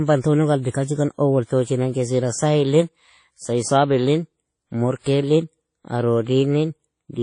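A speech recording carries mixed, smeary coding artefacts from start to finish, the sound of transcoding between lossy codecs, likely a low-rate MP3 re-encoded as WMA 1. A spectrogram would show a hard ceiling near 10.1 kHz, with patchy, blotchy energy beneath it.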